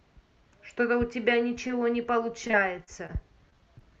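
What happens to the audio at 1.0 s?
Nothing goes wrong at 1.0 s: the speech passes through the Opus call path as it does elsewhere, with no dropout, glitch or other fault at that moment.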